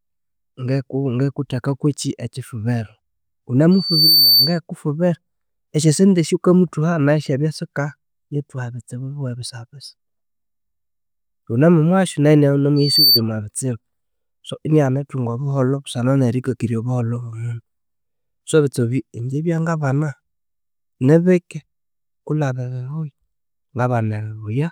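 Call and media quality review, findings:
Loudspeaker feedback squeal, 3.71–4.59 s and 12.76–13.21 s: a 4.6 kHz tone swelling over under half a second, a few dB above the speech. On a spectrogram, a bright horizontal line. The mic picks up its own speaker and loop gain exceeds one.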